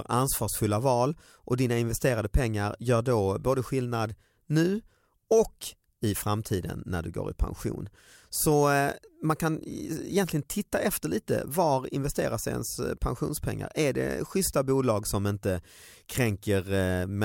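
No technical faults are audible anywhere in the recording.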